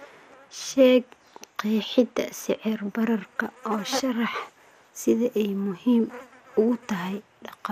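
Throughout the speech, the likely cause is MP2 compression running short of bits, a starved MPEG Layer II encode consistent with a rate around 80 kbps. With too little budget across its 32 sub-bands, the encoder drops the upper bands entirely, so nothing remains above 15.2 kHz, and it quantises the surviving bands coarsely. The result is plainly audible: a dulled top end with a gurgling, grainy roughness clinging to the voice from start to finish.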